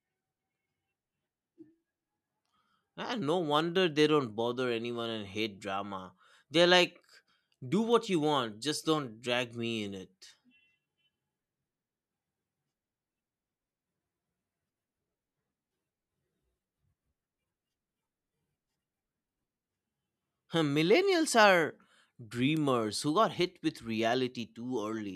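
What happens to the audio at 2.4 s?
Nothing goes wrong at 2.4 s; the speech carries on intact through that moment with no dropout, click, distortion or other fault.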